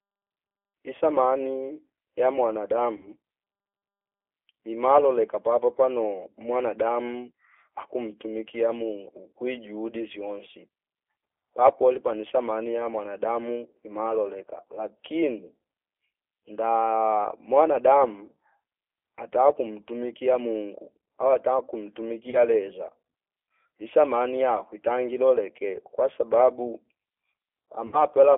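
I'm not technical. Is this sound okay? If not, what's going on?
No. The whole recording went through a G.729 codec, a squeezed phone-call format. Speech sounds thin, slightly rough and robotic, with no high tones.

There is also VoIP packet loss concealed by the speech codec at about 2.97 to 3.10 s, 22.30 to 22.38 s, and 27.87 to 28.03 s. Bits of the call went missing, and the phone filled the gaps by guessing, so the speech turns briefly into a buzzy tone or a hiss that fades.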